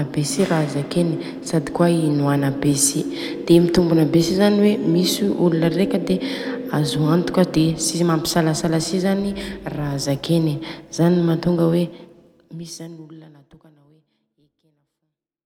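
The speech signal shows no technical faults, with the level easing down in a smooth, deliberate fade over roughly the last four seconds.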